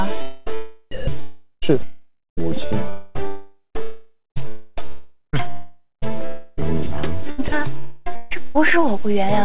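From 0.22 to 0.48 s the sound breaks off, and the last fragment is stretched into a fading buzz for roughly a quarter of a second. Audio then resumes further along, with about 0.24 s of material gone. This is most likely a long network dropout, where no packets arrived and the receiver concealed the gap. Unlike a voice-detector cut, the filler is a smeared, decaying copy of the preceding sound rather than a flat noise bed, and the sound skips ahead when it returns.

Between 0.91 and 8.66 s the sound is repeatedly chopped. Quiet edges and soft passages drop out in favour of a synthetic hiss, about 4.4 s in total. The likely cause is sound chopped by the voice detector, which switched sending on and off more than once. Unlike a dropout, nothing is skipped and there is no decaying buzz. The gaps are simply substituted with steady noise.

At 7.48 s a single brief stretch of 40 ms gives way to comfort noise. 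This is likely sound dropped by the voice detector, which took that moment for background. It is one short, clean substitution, unlike the repeated switching around it.

From 7.78 to 8.08 s a second long network dropout is likely. A fading fill of about 0.28 s covers the gap, and the sound resumes with roughly that much missing. Throughout, the call path's G.711 coding leaves nothing above 4 kHz.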